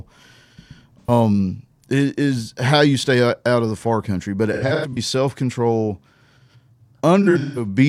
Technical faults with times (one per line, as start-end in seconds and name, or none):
1.00-1.11 AAC frame loss with concealment
4.53-4.98 AAC frame loss with concealment
7.22-7.67 AAC frame loss with concealment